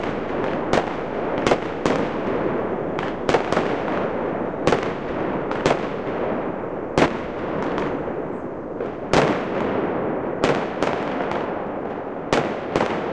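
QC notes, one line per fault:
Nothing stood out on listening to this audio.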